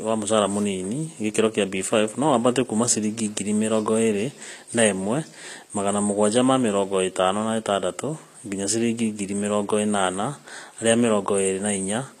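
From start to finish, the speech has bright but gritty, metallic treble, with s sounds turning lispy. This is likely HE-AAC compression: the upper band is rebuilt by copying lower bands upward rather than coded, which fits a low bitrate around 24 kbps.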